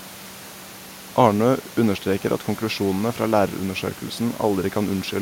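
Nothing in this speech recording stood out as a technical problem on listening.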